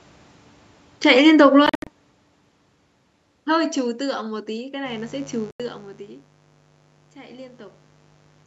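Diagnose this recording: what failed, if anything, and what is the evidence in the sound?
The call processing's automatic gain falling lowered its gain gradually from 0.96 s to 3.66 s, by about 15 dB. The speech starts loud, then sinks steadily along with its background, because the control judged the input too loud, or its background noise too strong, and kept turning it down.

A Bluetooth dropout is the likely cause of two silent holes in playback. From 1.66 s to 1.87 s, about 160 ms is missing in scattered gaps, the longest 73 ms. From 5.51 s to 5.60 s, another 87 ms is gone. Each time, the speech resumes further on, as though it had kept playing.

Mains buzz enters through the analogue wiring at 4.83 s and lasts to the end. It is a steady, raspy buzz built on 50 Hz harmonics, sitting somewhat below the speech level. Sharp switching spikes, twice per mains cycle, from a dimmer, rectifier or unshielded lead spread energy well up the spectrum.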